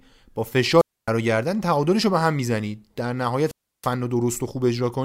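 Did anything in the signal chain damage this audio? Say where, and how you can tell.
Yes. Twice the speech breaks up, at 0.77 to 1.10 s and 3.44 to 3.90 s. Hiss swells, then near silence lasts 0.27 s and 0.32 s before the voice returns. This is wireless microphone squelch dropout: the analogue FM radio signal faded, so the receiver's squelch muted its output.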